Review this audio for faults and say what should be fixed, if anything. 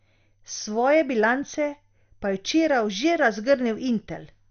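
Likely MP2 compression, present throughout: the speech sounds dull, with nothing above about 6.5 kHz, and carries a gurgling, grainy roughness. When a Layer II encoder is starved of bits it switches off its upper sub-bands entirely and quantises the remaining ones coarsely, so detail flickers in and out. The degree of damage fits a low bitrate, around 48 kbps. To prevent it, keep a lossless master and re-encode from that at a much higher bitrate.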